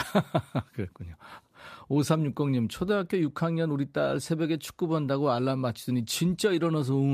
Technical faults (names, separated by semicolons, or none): none